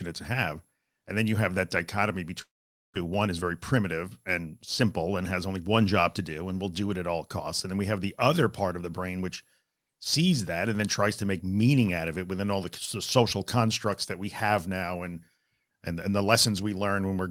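At 2.41 s, right after "you have that dichotomy", a long network dropout is the likely cause of a gap lasting until 2.98 s. The final sound is stretched into a buzzy tail that fades, then near silence, and about 400 ms of the original audio is gone when it resumes. On a spectrogram the last harmonics smear flat and dim into an empty band; the waveform tapers to a thin trace before energy returns.

From 3.05 s to 4.83 s, ending just before "and has only one", a jitter buffer speed-up follows. The receiver, holding too much audio after the gap, trims short pitch-period slices repeatedly, removing roughly a tenth of a second overall. Speech runs about 6% fast at unchanged pitch and sounds slightly rushed. The spectrogram shows harmonic spacing intact but syllables compressed in time, and the waveform shows periods dropped at splice points.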